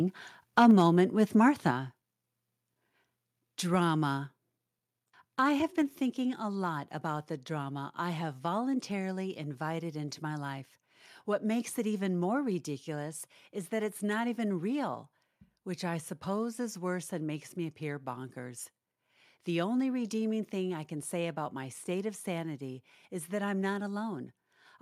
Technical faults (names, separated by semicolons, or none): microphone overload; microphone volume stepped down